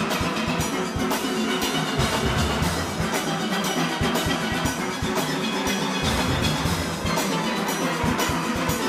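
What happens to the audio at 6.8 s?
Nothing goes wrong at 6.8 s; the audio plays through that moment intact, with no dropout, click or other fault.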